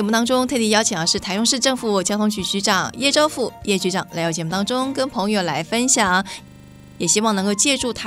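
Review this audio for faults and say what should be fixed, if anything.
From 6.48 to 7.0 s, a system hang loop: the host stalled while the hardware replayed a 40 ms buffer 13 times. It sounds like a 25 Hz buzz and shows as identical waveform blocks and regular spectrogram stripes. Prevent it with a watchdog that mutes or clears the output buffer whenever the audio thread stops refilling it.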